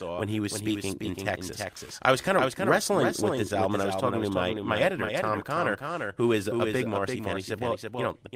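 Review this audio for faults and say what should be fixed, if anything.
Throughout the speech, a second, dry copy trails about 300 ms behind the original at about 5 dB quieter, giving a slapback echo with no room decay. This doubled audio track is likely from the signal being captured a second time through a slower path, or from an edit holding two out-of-step copies. Route the audio through only one capture path and check edits for duplicate layers.

Small timing hiccups recur across the whole clip at uneven intervals, so the pacing feels slightly unsteady. This is clock drift between sender and receiver: the sender's clock runs roughly 4% slow, so the receiver's jitter buffer keeps draining and must be refilled. Lock both ends to a common clock or use an adaptive resampler.

From 0.42 s to 8.31 s, starting just after "when he", the tempo wobbles with slight stretches. These are repeated timing corrections: the receiver keeps repeating short pieces, playing at about 96% speed and adding roughly 0.3 s overall. 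Smooth resampling rather than repeating pieces would hide the drift compensation.

From 3.35 s to 3.40 s, a sound is held too long with a slight buzz or dip. This is a short stall from a late packet: the buffer ran empty, about 15 ms was filled by stretching the last sound, and nothing was lost. A slightly deeper jitter buffer would absorb such late arrivals.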